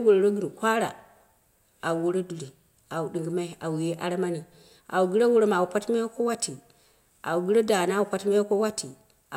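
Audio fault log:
No faults are heard anywhere in the speech. Nothing in the recording calls for a timed entry in this log.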